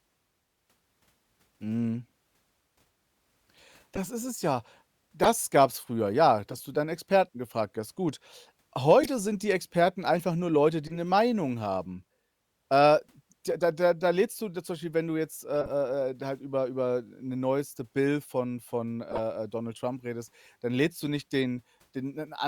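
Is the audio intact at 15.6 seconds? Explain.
No. A corrupt frame was decoded from 15.62 to 15.71 s, between "wenn du jetzt äh" and "äh halt über über": flipped bits in several compressed frames were played anyway, misplacing energy across frequencies and producing a chirp, squeak, blip or burst of noise peaking near -15 dBFS.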